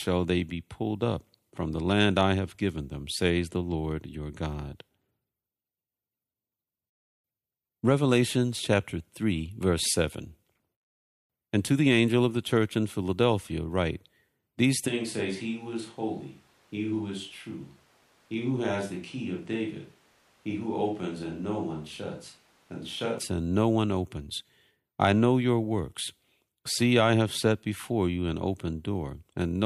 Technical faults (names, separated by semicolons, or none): switch to a distant microphone